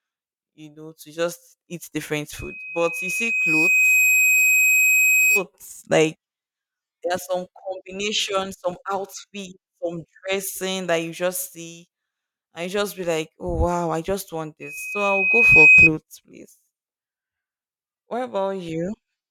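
A speech clip with loudspeaker feedback squeal in two places: from 2.37 to 5.44 s, just after "just eat different", and from 14.62 to 15.90 s, after "i just want". Each time a single 2.5 kHz tone swells over a second or so to roughly 10 and then 15 dB above the speech. This is a microphone picking up its own loudspeaker until the loop runs away. The gradual swell at one frequency sets it apart from a steady interfering whistle.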